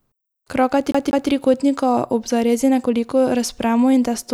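From 0.92 to 1.30 s the speech sticks like a CD stuck on one turn: a fault at one point on the disc throws playback back one track, so the same 190 ms slice replays twice with a brief mute at each jump. That fixed loop length and even rhythm separate it from a stammering network dropout.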